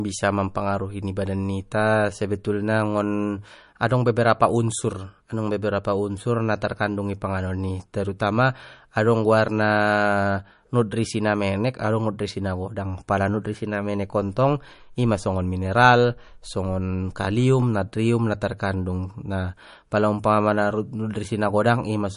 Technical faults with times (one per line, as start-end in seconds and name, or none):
0.00-22.16 MP3 compression